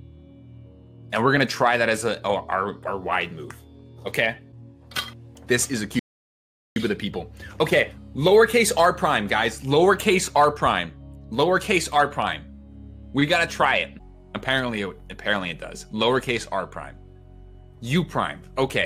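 A rebuffering stall occurs at 5.99 s. The player drained its store of downloaded audio and halted until more data arrived, leaving silence until 6.76 s. Playback then picks up at exactly the point it stopped, so nothing is skipped, but about 0.77 s is added.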